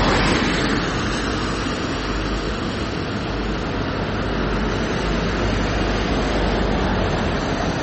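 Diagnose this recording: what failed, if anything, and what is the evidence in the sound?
The failure is at the codec stage, and it runs through the whole clip. Nothing is present above 8.2 kHz, so the top end stops dead at a fixed ceiling. Quiet detail flickers in and out, giving a watery, swirling texture, and transients sound smeared. The likely cause is heavy MP3 compression, which fits a bitrate around 32 kbps. Starved of bits, the encoder cut the treble and discarded weak frequency lines frame by frame.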